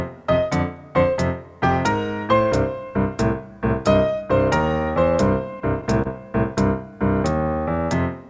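The audio comes through a call path whose top end stops at 8 kHz, which fits G.722 running at 64 kbps. At 6.02 to 6.07 s there's a short stall from a late packet: the jitter buffer ran dry, so the receiver stretched the last bit of sound for about 30 ms until the packet showed up, then carried on from the same point. Nothing is lost, but that moment is held a touch too long, and everything after it runs about 30 ms later.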